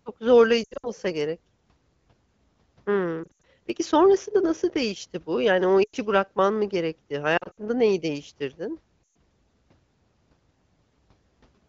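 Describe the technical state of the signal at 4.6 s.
At 4.6 s the speech passes intact, with no fault at that moment, only the band-limited character of the AMR wideband (HD Voice) codec, which sounds consistent with one of its clearer rates.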